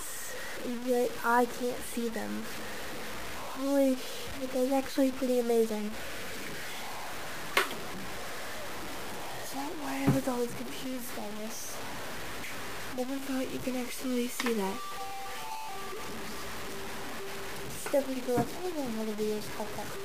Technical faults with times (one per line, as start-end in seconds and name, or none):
0.00-20.04 low bit depth without dither